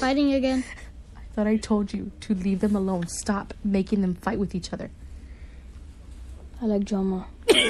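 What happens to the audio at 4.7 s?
At 4.7 s you're hearing the same thing that runs through the whole clip: plainly audible MP3 compression damage, likely from a low bitrate, around 64 kbps going by the sound. The encoder runs short of bits, so it cuts the treble at a fixed point and drops weaker frequency detail, which flickers in and out between frames. That's what gives the watery, swirly quality, with metallic chirps on bright sounds and softened attacks.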